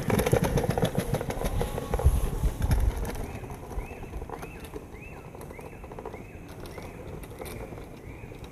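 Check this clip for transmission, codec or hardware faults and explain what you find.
One fault runs through the whole clip. Stereo read as mono throughout: interleaved left-right samples play as one channel, halving speed and dropping pitch 12 semitones, with a faint mirrored image above, unlike a plain sample-rate mismatch.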